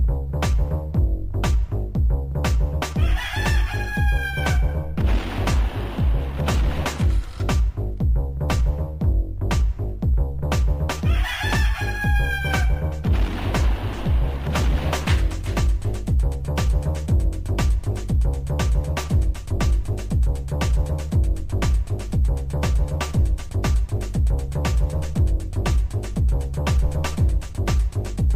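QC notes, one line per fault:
10.42–11.92 s, sample clock jitter: for this stretch the converter's clock wanders, so each sample is captured a little early or late by an amount on the order of a microsecond. Where the waveform changes quickly, that timing slip becomes an amplitude error, here roughly 45 dB below the signal. It comes across as a hiss or grain riding on the sound, strongest on loud and bright passages and gone in quiet gaps.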